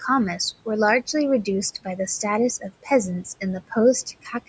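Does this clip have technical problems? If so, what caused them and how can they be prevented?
Yes. Noise suppressor artifacts run through the whole clip. The suppressor cuts the steady background by about 18 dB, frame by frame. The noise sinks in the gaps and rises back under the speech. To prevent it, lower the suppression strength.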